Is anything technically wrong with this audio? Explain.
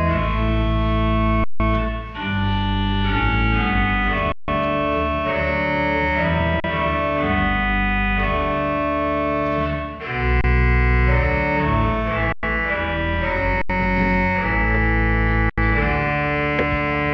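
Yes. The sound stops briefly seven times from an underrun with a held sample. The freezes fall at 1.44 s (160 ms), 4.32 s (160 ms), 6.6 s (40 ms), 10.41 s (30 ms), 12.32 s (106 ms), 13.62 s (80 ms) and 15.50 s (80 ms). The output buffer ran dry each time. The converter kept outputting its last value, so the waveform goes flat and the sound cuts out with almost no click. No audio is lost. Playback picks up where it paused, so each restart is soft.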